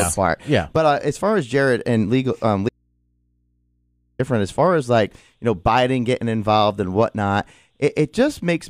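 Right after "and legal um", at 2.69 s, there's an audio dropout to a faint residue: the speech cuts off dead for about 1.5 s, leaving just low hum roughly 45 dB down, until "as far as like" at 4.19 s. Likely a lost feed into a still-live input.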